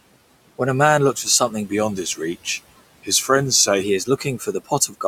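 From 1.71 to 3.83 s, after "man looks for something", the speech slows by 6.5% and drops about a semitone (116 cents), then snaps back before "he is". That is likely a drift correction step. Unlike a constant wrong-rate error, it is temporary and ends abruptly.

From 4.05 to 4.95 s, after "he is", this is speech cut by the noise suppressor. Around 300 ms of speech is pulled down as much as about 15 dB together with the room noise, which sits about 20 dB below the speech. Those parts sound swallowed rather than cleanly silenced, as they would be in a dropout.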